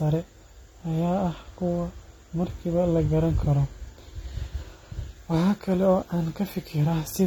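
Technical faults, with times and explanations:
Throughout, AAC compression: the speech is dull and smeared, with a fizzy, warbling texture on sibilants and nothing above 18 kHz, likely from AAC-LC coding at a rate that fits about 32 kbps. Unlike a plain low-pass filter, the damage also sits inside the band.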